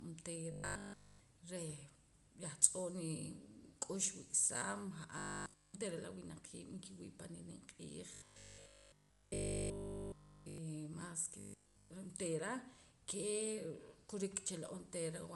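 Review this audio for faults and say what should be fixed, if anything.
The speech has a grainy, breathy edge all the way through. This is likely Bluetooth LC3 compression, and the sound fits LC3 at around 48 kbps with 10 ms frames. The codec discards parts of the upper spectrum and fills them with shaped noise. That noise fill sets it apart from plain low-pass filtering, which only dulls the sound without adding grain. To prevent it, raise the LC3 bitrate or use a wired or higher-quality link.

Robotic sound from repeated short buffers occurs at 0.52–1.20 s, 5.18–5.74 s, 8.14–10.58 s (ending just before "mas ke") and 11.40–11.90 s (just after "mas ke"). In each stretch the speech becomes a rigid, metallic buzz at 50 Hz, with essentially all of the audio replaced by repeats. Playback is likely looping the last chunk of audio while new data fails to arrive, and the 50 Hz rate fits a 20 ms buffer. 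The fixed, steady pitch sets this apart from codec warble or packet-loss concealment, which smear the sound without imposing one constant tone. To prevent it, enlarge the playback buffer and make sure audio is delivered on time.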